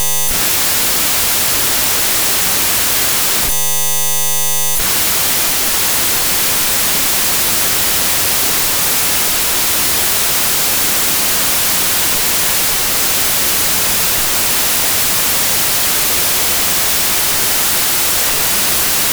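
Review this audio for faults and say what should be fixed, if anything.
Wrong sample width runs through the whole speech clip. The audio was written as 32-bit integers but read as 16-bit. Each real sample splits into two values. The upper half keeps the signal's top bits. The lower half is unrelated low-order bytes, heard as loud hiss. Twice as many samples now play at the same rate. The speech runs at half speed, an octave low, buried in noise. Fix it by reading the data back at the same sample width it was written with.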